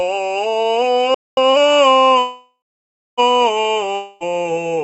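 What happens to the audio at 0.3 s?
Nothing goes wrong at 0.3 s: the music plays through intact at that moment, with no dropout, click or distortion.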